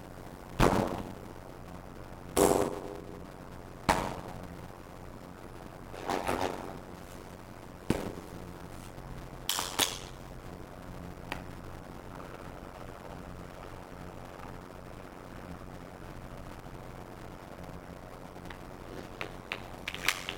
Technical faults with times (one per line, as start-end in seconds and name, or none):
0.00-20.38 block size mismatch (padded)